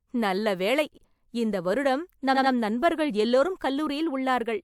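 A speech recording with repeated frames: a short run of compressed frames was delivered to the decoder more than once, so the same 85.3 ms chunk plays again. This fits a pair of codec frames. At 0.94 s the chunk ending at 1.02 s repeats once, a brief stutter that adds 85 ms. At 2.35 s the chunk ending at 2.52 s plays twice more, a triple stutter that adds 171 ms.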